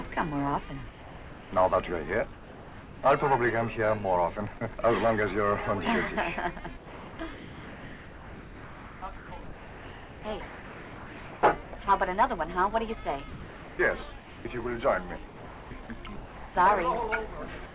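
The audio passes through a call path whose band stops at 4 kHz, consistent with G.711 A-law at 64 kbps. Sound dropped by the voice detector is heard four times: 0.89 to 1.52 s, 2.33 to 3.02 s, 4.58 to 4.61 s, and 17.66 to 17.74 s. Each time the real sound gives way to steady, synthetic-sounding noise, then returns. The gaps are about 630, 690, 30 and 90 ms long. Of that, roughly 290, 350, 20 and 60 ms of actual sound goes missing. The likely cause is the sender's voice detector judging the sound as background and halting transmission, with comfort noise filled in at the receiver. Sound chopped by the voice detector covers 6.77 to 11.87 s, 13.31 to 14.45 s, and 15.26 to 16.55 s. Here the detector likely switches on and off repeatedly. Pieces of sound vanish into comfort noise. About 4.1 s is replaced in the first stretch, 750 ms in the second and 900 ms in the third. The sound turns choppy and broken in these spans.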